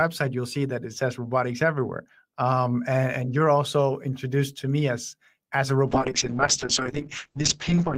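From 5.88 s to the end of the clip, the speech abruptly turns muffled and rough, losing its airy top end and taking on a coarse, watery texture that never recovers before the audio stops. This is a call bitrate drop. The encoder's rate fell from 32 kbps to 7 kbps, so it coded the speech far more coarsely and narrowed the audio bandwidth from 20 kHz to 8 kHz for those final 2.1 seconds.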